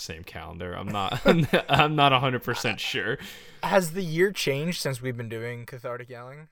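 No technical faults can be heard anywhere in the speech.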